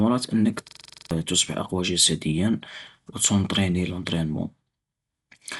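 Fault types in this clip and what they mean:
Dolby Digital compression: throughout, the speech sounds dull and band-limited, with nothing above 11.4 kHz and a rough, fluttering noise around tonal parts. That points to a low bitrate, roughly 64 kbps, where the encoder likely left many frequency lines without mantissa bits and the decoder filled them with dither noise.
System hang loop: from 0.68 to 1.11 s, one 42.67 ms slice of audio repeats exactly ten times as a stutter at 23.4 Hz, just before "أقوى جسدياً وتونطريني لونطرينمون". The hardware kept cycling one buffer, fitting 2048 samples, while the system froze, losing about 400 ms of speech.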